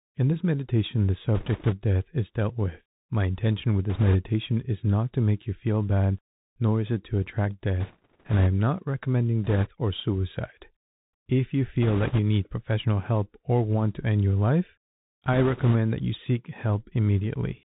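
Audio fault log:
Throughout, Bluetooth CVSD headset codec: muffled narrowband speech with nothing above 4 kHz, scratchy s sounds and a granular hiss, from one-bit up/down coding.
1.35–1.74 s, 3.90–4.16 s, 7.80–8.47 s (after "is it to attract", before "not recommending"), 9.44–9.69 s (before "or suicide"), 11.82–12.19 s (before "need professional help or"), 15.33–15.76 s, bit errors on a Bluetooth voice link: bursts of rushing crackle without loud clicks, as a few percent of flipped bits each nudge the waveform slightly.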